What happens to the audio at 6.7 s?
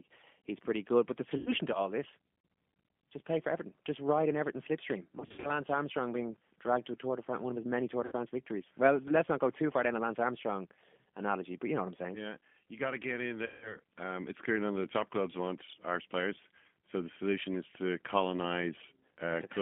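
At 6.7 s the speech carries the G.729 codec sound that runs through the whole clip. The codec rebuilds each short frame from a vocal tract filter, a pitch estimate and a few coded pulses, which fits an 8 kbit/s VoIP link. The speech sits in a 200 Hz to 3.5 kHz telephone band and has a plainly audible rough, buzzy, synthetic edge. That grain is what separates it from simple band-limiting, which would sound muffled but stay smooth.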